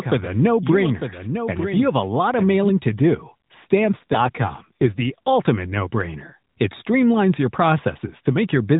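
From the very start until 2.70 s, just before "to do", there's a doubled audio track: a clean copy about 10 dB down trails by roughly a second, likely a second capture path, then cuts off abruptly. Between 3.81 and 5.35 s, after "to do" and before "no brainer", the narrowband phone-call speech goes rougher and buzzier with no gap or band change. That's an AMR rate drop, which fits the codec stepping down from 12.2 to 5.9 kbps.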